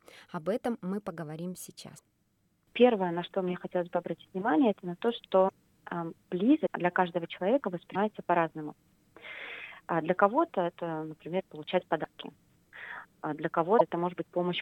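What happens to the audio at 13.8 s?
A broken MP3 bit reservoir is the likely cause at 13.78–13.81 s: after missing frames, the next frame decodes from the wrong bytes, so the audio jumps ahead with a short glitch.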